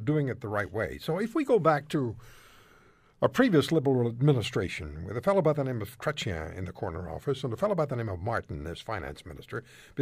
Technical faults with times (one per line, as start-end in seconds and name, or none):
1.95-3.28 drift correction step
7.11-7.64 drift correction step